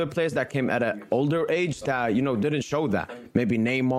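No faults are audible anywhere in the clip.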